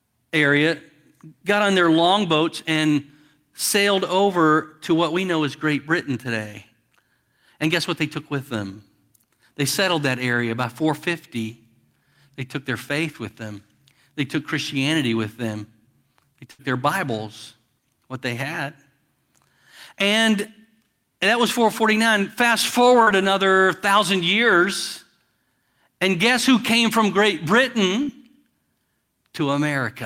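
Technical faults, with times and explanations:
16.51 to 16.62 s, burst of packet loss: about 80 ms of the speech never arrived in time. The receiver stretched the last sound over roughly 73 ms, fading it as the gap went on, so a held buzz or hiss sinks away before the speech picks up further along with that stretch gone. On a spectrogram the last sound's pattern holds steady and dims, then the pattern resumes abruptly. The waveform shows a stretch of continued, decaying sound ending in a hard seam.
23.03 s and 28.03 s, short concealed packet loss: each time about 40 ms failed to reach the decoder, and the receiver filled roughly that much by extending the preceding sound before blending back. The first comes just before "another thousand years", the second about five seconds later. Each is heard as a brief smear or wobble lasting a few hundredths of a second. A spectrogram shows a short patch of copied, slightly blurred texture. 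The waveform shows a brief stretch of continued sound.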